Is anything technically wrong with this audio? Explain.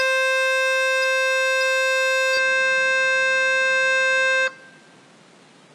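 Yes. Throughout this music, the treble sounds gritty and metallic, stopping at 14.8 kHz: likely HE-AAC compression, at a bitrate near 20 kbps, rebuilding the treble from copied lower bands. Unlike a plain low-pass, the treble is present but synthetic and out of step with the harmonics below.

From 2.37 s to the end, the top falls to 11.4 kHz with a new noise floor about 30 dB down, with no gap and no level change. This is likely the input switched to a poorer device with a narrower band, not a codec change, because the tone and noise shift at one instant.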